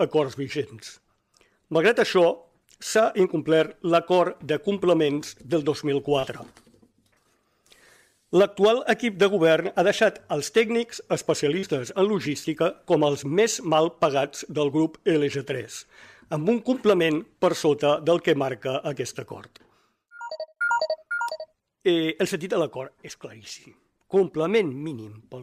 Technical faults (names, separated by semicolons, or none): short concealed packet loss